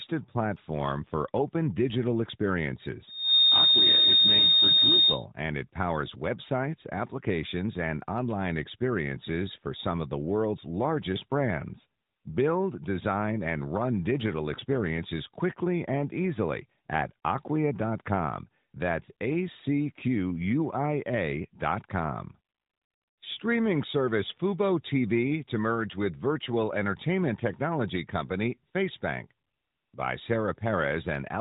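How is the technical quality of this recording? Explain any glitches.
Two real glitches here: a feedback squeal early on and a couple of brief dropouts from lost AMR speech frames. The speech runs through a narrowband AMR mobile path, so nothing gets above 4 kHz, and the mild codec colouring points to the 12.2 kbps mode.

From 3.07 to 5.25 s there's a loudspeaker feedback squeal at 3.7 kHz. The mic is hearing the loudspeaker it feeds, and at that frequency the loop gain tops one, so the tone keeps feeding itself. It swells up over about a third of a second into a steady whistle that sits roughly 10 dB above the speech, then stops at 5.25 s.

The other two are lost AMR speech frames, one frame each, at 14.60 to 14.64 s and again at 19.06 to 19.11 s. A frame got hit by radio errors and failed its checksum, so the decoder filled the 20 ms gap by reusing the last good pitch and vocal-tract settings at reduced gain. 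You hear it as a quick little dip or warble in the speech, and the voice comes back weak or rough for a moment.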